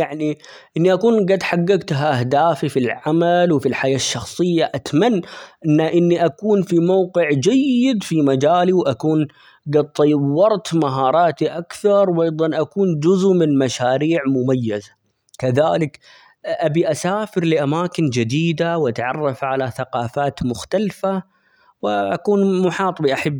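Nothing in the recording stood out as a technical problem on listening.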